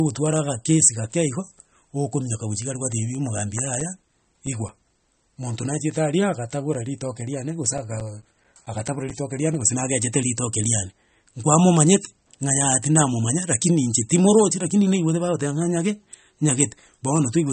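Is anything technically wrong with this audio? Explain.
Yes, there are two problems.

For the whole clip, the speech has nothing above 8.4 kHz and sounds dull and smeared. This is likely low-bitrate audio saved at a high bitrate: the sound points to an MP3 made at around 34 kbit/s and later re-encoded at 320 kbit/s. The second pass cannot restore the top end the first pass discarded. That hard ceiling inside a large high-bitrate file separates it from a single poor encode.

CD scratch ticks occur from 3.15 to 5.56 s, ending just before "nachiete aria agatabora ritoke", and again from 7.34 to 9.76 s, ending just before "nagechete ritoke riane nkwamomanyete". Each burst has evenly spaced ticks at about five per second, each lasting only a few milliseconds and up to roughly 10 ms in the second burst. On each turn of the disc, the damaged data exceeded what error correction could rebuild, so the player patched or muted those samples. 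Unlike random vinyl crackle, the ticks keep a steady rhythm, though their strength is uneven.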